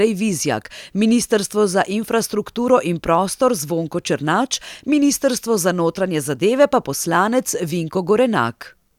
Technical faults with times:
none

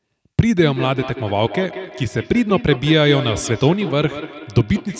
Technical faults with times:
0.57-5.00 feedback echo between two devices

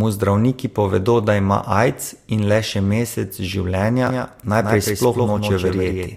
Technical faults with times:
4.07-6.17 doubled audio track

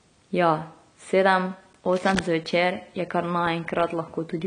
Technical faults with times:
0.00-4.46 AAC compression
1.89-2.22 cable scratch noise

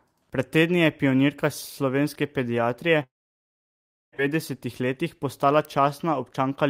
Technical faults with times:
3.03-4.20 long network dropout
4.80-5.80 jitter buffer speed-up

